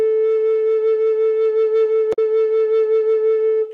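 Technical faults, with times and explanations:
2.10 to 2.19 s, damaged data in a compressed stream: the music breaks into a brief glitch, about 90 ms long, that does not sound like part of the recording. A stretch of the compressed data here was corrupted. The decoder misreads or rejects the affected frames and loses its place in the stream. It then hunts for the next valid frame header before clean playback resumes.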